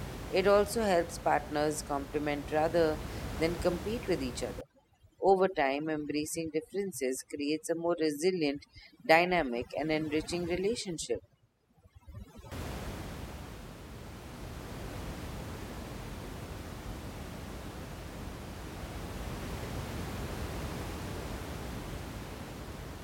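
From 4.61 s to 12.52 s, just after "than compete with each", overdone noise removal sets in. The room noise sits about 11 dB below the speech. The reducer cuts bands near that noise floor too hard. The background drops and breaks up into twinkling specks.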